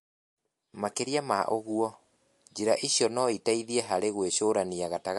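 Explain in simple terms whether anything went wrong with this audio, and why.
The speech has a dull top and a watery, swirling texture from start to finish. Nothing is heard above about 11.3 kHz. This is likely MP3 compression with too few bits. The encoder cut the treble and dropped quiet details, which flicker in and out.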